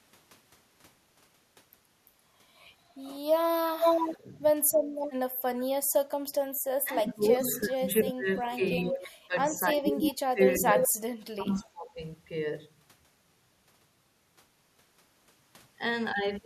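A speech recording with two recurring faults. At 3.82 to 4.13 s, 10.02 to 10.11 s and 10.82 to 10.88 s a second copy of the voice trails the original by 341 ms, at first slightly louder than the speech and later about as loud. This is echo leak, likely from a loudspeaker on the far end whose echo canceller let its microphone pickup through. The talker's voice also sinks or breaks up at 4.16 to 4.28 s, 5.31 to 5.35 s, 6.83 to 8.63 s, 8.79 to 10.4 s and 10.59 to 11.99 s, with dips of roughly 15 to 30 dB. This is speech suppressed in double talk: when both sides overlap, the canceller likely treats the talker as echo and turns it down.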